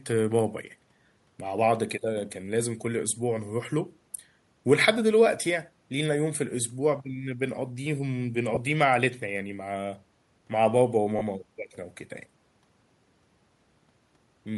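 Across the whole speech clip the upper band sounds breathy and grainy, noise-filled rather than swirling, most likely Bluetooth LC3 compression at a rate near 48 kbps with 10 ms frames. At 8.55 to 8.57 s and again at 11.19 to 11.21 s, lost LE Audio frames, about two 10 ms frames each, are concealed by reusing the previous spectrum, giving a brief noisy smear instead of a silent gap or click.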